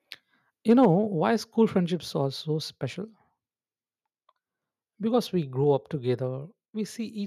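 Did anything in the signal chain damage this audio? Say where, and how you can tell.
Yes. Between 0.7 and 0.85 s, just before "why school", the loudest speech peaks flatten and pick up a harsh, crackling edge. This is microphone overload at the converter stage. The input level sits about 2 dB above full scale, so a small share of samples, roughly two percent, hit the ceiling and lose their tops. A mic gain set too high is the likely cause.

Right after that overload, at 0.85 s, the voice and the background drop together by about 2 dB in one step. This is the microphone volume being stepped down by call processing, likely an automatic gain control reacting to the clipped peak. It steps down again at 1.86 s, between "why school" and "are so special", and then at 5.64 and 6.66 s. Each step is about 2 dB. Each change is abrupt, not a gradual fade.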